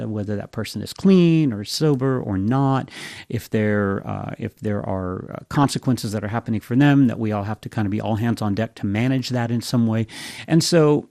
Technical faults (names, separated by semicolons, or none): MP2 compression; DAB burbling